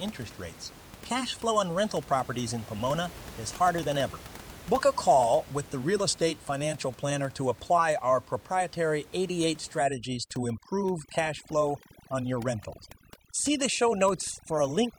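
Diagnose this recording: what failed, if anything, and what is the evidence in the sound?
The call-processing stage failed: overdone noise removal takes hold from 9.79 s to the end of the speech. The suppressor is set so aggressively that any frequency band sitting near its noise estimate is pushed far down or gated off. The room noise, about 20 dB below the speech before that point, drops and breaks up into twinkling specks, and the quieter parts of the speech are cut away with it.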